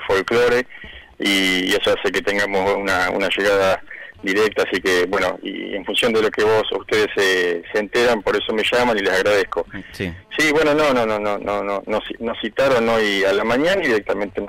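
At 1.87 s there is a small jump forward in the sound, likely a dropped buffer (overrun), where roughly 10 ms of audio was overwritten before being read and the two sides were joined directly. Unlike a dropout, no silent gap is heard.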